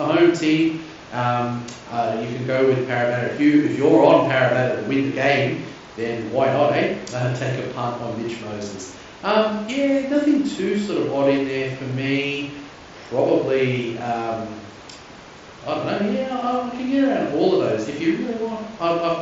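No faults are audible; the speech carries the roughly 8 kHz bandwidth and faint grain on louder passages expected of a Bluetooth mSBC headset link, and nothing departs from that.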